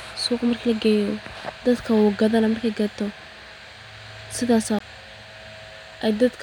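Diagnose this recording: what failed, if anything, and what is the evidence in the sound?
A CD skip at the playback stage, at 4.79 s, in this speech clip. A brief mute of roughly 20 ms interrupts the speech, and the speech then resumes from a different point rather than continuing where it left off. The laser lost tracking and landed on another turn of the disc's spiral. On the waveform this appears as a near-flat gap with a sharp edge. The spectrogram shows a thin vertical broadband line and a discontinuity in the speech pattern either side.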